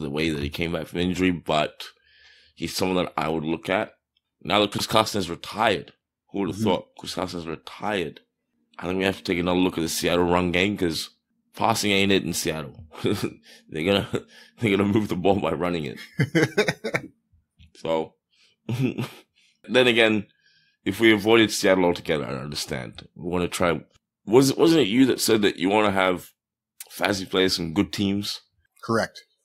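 At 4.72 to 4.8 s the speech has chunks out of order: one 20 ms chunk arrives three chunks late and plays after the audio that should follow it. Nothing is missing, but the three hard joins give a brief jumbled stutter.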